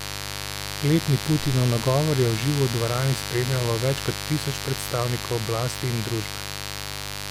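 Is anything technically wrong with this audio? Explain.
Yes, the speech carries mains buzz from start to finish. A steady, raspy buzz sits under the speech throughout, roughly 10 dB below it. It comes from the 50 Hz mains supply. A dimmer, a rectifier or a missing shield lets sharp switching spikes into the signal twice in every mains cycle. Because those spikes are so abrupt, they produce a whole series of 50 Hz harmonics reaching up into the kilohertz range. That dense stack of harmonics makes the buzz sound raspy rather than like a pure hum.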